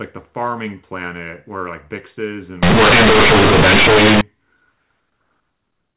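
A speech clip carried as A-law telephone audio, band-limited below 4 kHz. From 2.63 to 4.21 s it shows companded audio read as linear. The A-law bytes are played as plain 8-bit samples without expansion. Quiet parts become as large as loud ones. The sound turns loud, buzzy and harshly distorted.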